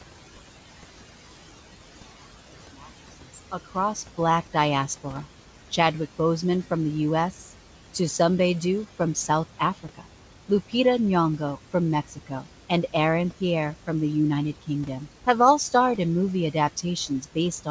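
From the start, the room noise in this speech recording dips between phrases and rises under them. These are noise suppressor artifacts: the suppressor pulls the bands it judges to be steady noise down by about 13 dB, frame by frame, so the residue keeps shifting.

The same processing also swallows parts of the speech itself. Faint stretches are heard at 2.82–3.96 s, 7.31–7.95 s, 8.96–10.73 s, 11.71–13.88 s and from 16.53 s to the end, with drops of about 10, 7, 16, 16 and 17 dB. This speech cut by the noise suppressor happens because quiet sounds are mistaken for noise, costing roughly 100, 150, 300 and 300 ms in the first four spans.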